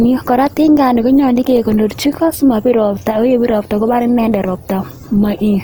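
Throughout the speech, the signal has likely passed through Opus compression in its music (CELT) mode, at a rate that fits about 24 kbps. With too few bits, the encoder keeps each band's overall energy but fills the fine detail with folded copies of lower bands or with noise. The bandwidth stays full, reaching about 20.2 kHz, yet the damage is plainly audible: tonal parts of the sound come out noisy, rough and grainy.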